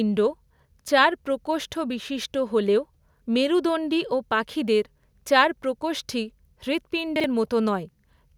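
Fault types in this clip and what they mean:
Chunks out of order: near 7.2 s, a 40 ms piece of the speech plays one chunk late, so two short slices swap places and the passage from 7.16 to 7.24 s comes out briefly scrambled, with three abrupt seams. Unlike a dropout or skip, nothing is missing and no silence appears, and unlike a stutter no slice is heard twice. The same material is simply jumbled.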